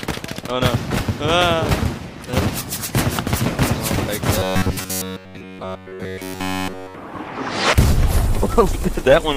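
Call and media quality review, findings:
Robotic sound from repeated short buffers, 4.39 to 6.95 s. Likely cause: audio arriving too seldom, so playback loops one short buffer throughout. 93.8 Hz buzz suggests about 10.7 ms buffers; real audio skipped, sound becomes rigid and metallic.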